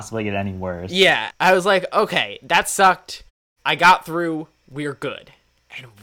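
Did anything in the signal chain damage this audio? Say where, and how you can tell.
No, nothing in the chain damaged this speech.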